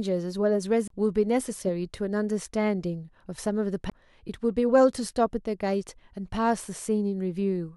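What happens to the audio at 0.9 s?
Right around there, from about 0.88 to 0.90 s, there's a CD skip. The laser lost its place on the spiral track, probably from a knock or a flaw on the disc, and landed on a different turn. You hear a very short dropout of around 30 ms, and the speech picks up from a different point, so the flow of the sentence lurches instead of continuing smoothly.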